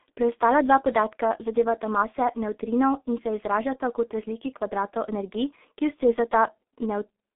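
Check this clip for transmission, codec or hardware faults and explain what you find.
G.723.1 codec damage runs through the whole clip. Sound stops above 3.8 kHz, inside a 250 Hz to 3.6 kHz band. The heavy damage fits a 6.3 kbit/s rate. A coarse, slowly updated voice model leaves speech muffled and hoarse, with smeared consonants.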